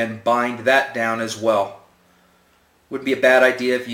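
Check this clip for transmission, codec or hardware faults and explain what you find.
One fault runs through the whole clip: crude rate conversion. Samples are repeated without filtering, which fits a 44.1 kHz to 48 kHz conversion. The periodic error, roughly 25 dB below the signal, creates inharmonic copies, heard as a gritty buzz tracking loud and high sounds.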